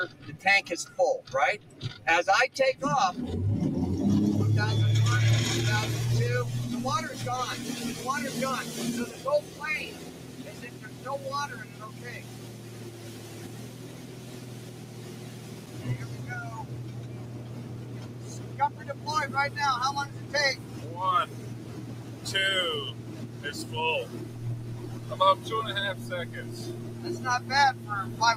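Throughout the clip, a noise suppressor built for speech is applied to music or sounds. It treats sustained tones, ambience and reverb as noise, pulling them down by as much as roughly 15 dB, so held material and tails pump and thin while attacks pass.

From 16.84 to 18.81 s, sound is cut by the noise suppressor. It misreads this passage as noise and attenuates it by up to about 3 dB for roughly a second and a half in total, so the sustained portions dip and their decay shortens.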